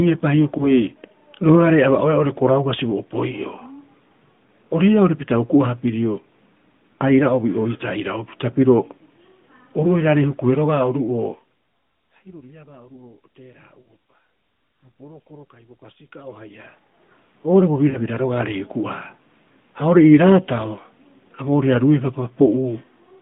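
Radio errors corrupt speech frames, so the AMR decoder conceals them by repeating its last good pitch and vocal tract settings at falling gain. These lost AMR speech frames first appear at 0.58 to 0.66 s, where a single 20 ms frame leaves a brief dip and warble. At 13.82 to 13.92 s a 40 ms gap is drawn out, and the speech returns rough for a moment.

From 16.02 to 17.13 s the level is changed in coarse 2 dB steps, about ten each second, with no smoothing, for a change of roughly 25 dB. Each step clicks, producing zipper noise, a ticking that rides on the speech while the level moves.

The lost frames recur at 17.90 to 17.99 s, another 40 ms stretch smeared and faded before the speech resumes weakly.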